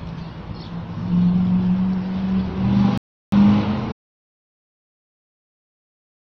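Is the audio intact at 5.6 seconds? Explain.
No. At 5.6 seconds the clip is inside an audio dropout to silence. It begins at 3.92 s and runs to the end of the clip. The sound cuts off abruptly at that point. What follows is silence, with no room tone or background left. The likely cause is a lost input, such as a disconnected device, a failed link or a mute, while the recorder kept writing silence. Whatever happened after 3.92 s is gone.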